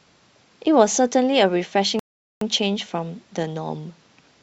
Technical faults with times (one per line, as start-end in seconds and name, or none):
1.99-2.41 rebuffering stall